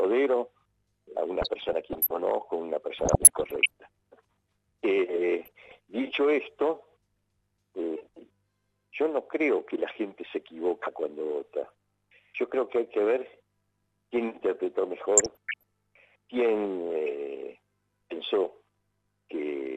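DAB burbling bubbles through the audio at 1.42–2.11 s, 2.98–3.70 s, 5.43–5.77 s and 15.17–15.63 s: a bit error rate of roughly 0.4–0.7% corrupts individual MP2 sub-bands, producing short noise blips rather than clean dropouts.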